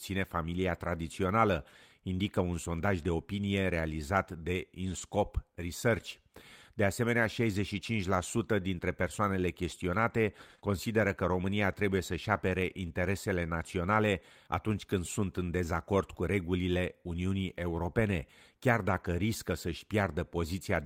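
This is a speech clip with two kinds of network damage. Lost packet rebuilt from error correction shows up at 0.83–0.85 s, 4.97–4.99 s (right after "de opinie realizat de"), 7.23 s, 10.63–10.66 s and 18.88–19.06 s. The last is longer, about 100 ms, consistent with five packets. There's no gap, since the decoder plays the low-bitrate copy carried in the following packet, but those stretches come out rougher and noisier. Just before that 10.63 s spot, right after "dintre persoanele chestionate", there's a short concealed packet loss at 10.55–10.60 s and 10.60–10.63 s. Here the audio simply didn't arrive in time, so the receiver extended the last sound and blended back in, giving a brief smear or wobble.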